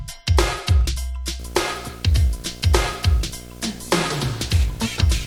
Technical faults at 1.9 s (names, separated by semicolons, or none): video or display buzz